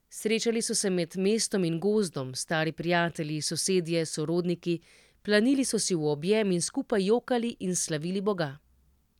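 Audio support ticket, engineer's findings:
No faults found on listen-through of the speech clip. Nothing to attribute to any component in the chain.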